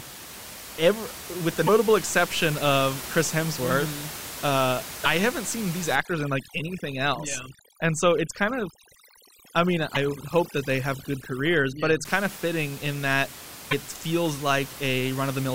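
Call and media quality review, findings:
Short glitches at 0.33, 1.66, 5.03, 9.94 and 13.70 s. Each lasts about 25 to 30 ms, roughly one 26.1 ms frame. Brief chirp, noise burst or hole, with the audio skipping ahead. Landmarks: the first falls just before "ever with the", the second just after "ever with the", and the third just before "haven't seen these". Likely cause is a broken MP3 bit reservoir. A frame was dropped, and the next frame reached back for borrowed bytes that now belong to a different frame.

Overdone noise removal from 5.95 to 12.05 s. The background drops, with twinkling specks where bands flicker on and off. The noise reduction stage is set too aggressively. It cuts bands that sit close to its noise estimate and removes quiet speech detail with them. Outside this span, room noise sits about 13 dB below the speech.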